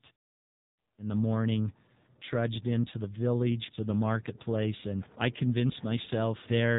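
Speech passed through the AMR narrowband mobile codec at a low mode, which fits about 6.7 kbps, resynthesising each 20 ms frame from a sparse vocal-tract model. Throughout, nothing above 3.8 kHz remains, and heavy coding leaves the voice thin, buzzy and synthetic.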